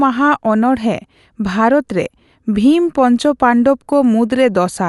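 A speech clip with Dolby Digital compression damage throughout. Nothing remains above 11.4 kHz, so it sounds dull and rough. This likely comes from low-bitrate encoding, around 64 kbps.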